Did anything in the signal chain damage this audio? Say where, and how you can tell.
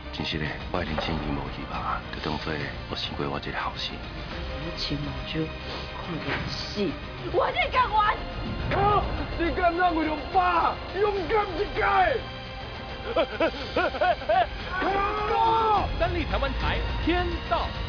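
No, nothing in the signal chain stood out as damaging this audio when I listened to it.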